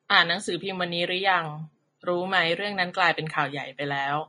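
From start to finish the speech carries plainly audible codec damage, likely Vorbis compression at a low quality setting, which fits a bitrate near 29 kbps. Nothing survives above 10.6 kHz, so a spectrogram shows a flat ceiling there, and the band just below it breaks into mottled, noisy patches where the fine treble was quantised coarsely into noise. The result sounds hissy and grainy, with roughened tones and softened consonant attacks.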